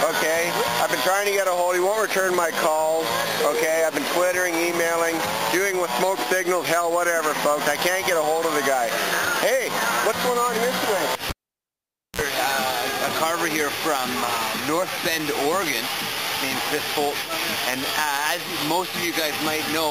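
At 11.30 s a pop cuts the sound to near silence for about 0.87 s, then a 51 ms burst of 60 Hz mains buzz and a second pop bring it back by 12.21 s. A live cable was pulled and plugged in, the tip briefly touching first.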